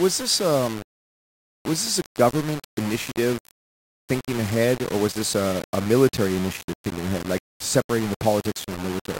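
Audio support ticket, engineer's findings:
Low bit depth without dither, throughout the speech. Likely cause: a converter or format stage rounding samples to very few levels, which fits 5-bit. Error tracks the signal: gritty distortion changing with it, error only about 15 dB below, quietest passages sputtering or dropping out.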